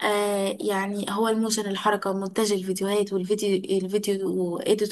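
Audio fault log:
No technical faults are present in this speech recording; the signal stays intact and continuous throughout.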